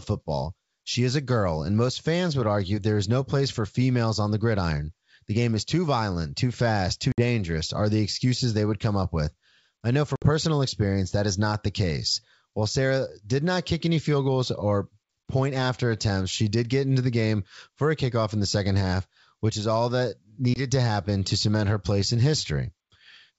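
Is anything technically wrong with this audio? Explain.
Yes. There is packet loss on an ADPCM call at 7.12–7.21 s (after "violent too fast too"), 10.16–10.27 s (after "up with I know") and 20.54–20.61 s (before "to happen to cement"). These are hard-edged silent gaps of 60, 60 and 20 ms, which fits about three, three and one lost packets. The decoder's predictor and step size lose sync with the sender, so the speech returns distorted until it settles within some tens of milliseconds. The wideband G.722 coding underneath sounds consistent with 64 kbit/s operation.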